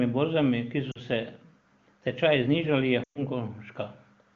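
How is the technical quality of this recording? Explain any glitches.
Two dropouts from lost AMR speech frames mar this wideband AMR-WB call audio, where the codec itself adds only faint colouring.

At 0.91–0.98 s (40 ms) and 3.03–3.23 s (120 ms), corrupted frames forced the decoder to repeat its last good settings at decaying gain. Each drops to near silence within two frames. A spectrogram shows frozen harmonics dimming to a gap, and the waveform envelope shrinks.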